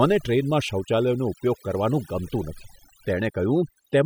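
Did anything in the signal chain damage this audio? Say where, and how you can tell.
Yes. A noise suppression stage in the call processing was set far too aggressively, producing overdone noise removal across the whole clip. Frequency bands near its noise estimate get gated down, so the background drops and breaks up into twinkling specks, and quieter speech detail vanishes.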